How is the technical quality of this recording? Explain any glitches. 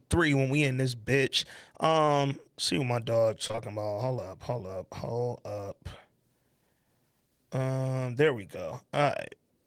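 The recording has short concealed packet loss, heard at 2.05 to 2.09 s and again as a run of three back-to-back losses from 3.47 to 3.59 s. Each time about 20 ms of the call arrived too late for the decoder, and the receiver bridged the hole by extending the preceding sound, pitched if voiced, noise-like if not, before blending back. Unlike a plain dropout, there is no silent gap. You hear a brief smear or wobble, longest around 3.5 s, where a short consonant may blur away.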